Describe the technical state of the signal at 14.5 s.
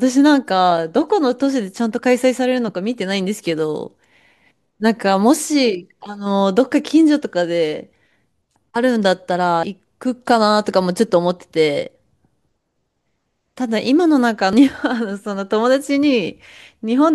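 At 14.53 s the speech skips about a tenth of a second across a gapless join, likely audio missing between 5 s chunks.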